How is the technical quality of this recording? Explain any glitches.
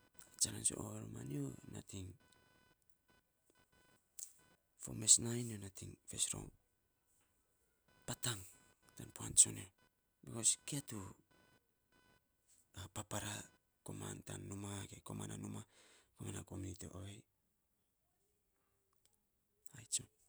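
The recording has one clear glitch. From the start to 14.2 s there is computer activity noise. A faint buzzing chirp, pulsing at roughly 500 Hz, sits about 35 dB below the speech. Processor or graphics load shifts the shared ground, so the noise follows the computer, not the talking.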